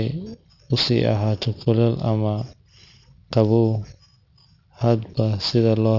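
Sibilants in this speech clip sound gritty and metallic throughout, with the spectrum running hard up to about 6 kHz. This is aliasing: unfiltered content above that point has folded back as unrelated tones, only around 15 dB below the speech, which fits an unfiltered drop to a 12 kHz rate.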